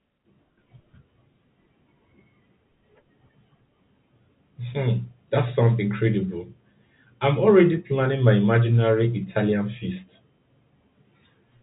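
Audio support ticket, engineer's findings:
No faults found in the speech. The telephone coding path can be heard working as expected, with nothing passing above about 3.8 kHz and only faint coding noise sitting under the signal.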